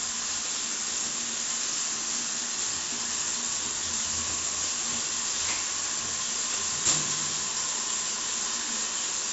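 A recording of everyday sounds, degraded throughout by 4-bit ADPCM compression: heavy gritty hiss rides on every loud event and sharp attacks distort because the adaptive step lags behind. Nothing is present above 7.7 kHz, which fits a 16 kHz sample rate and a 64 kbps stream.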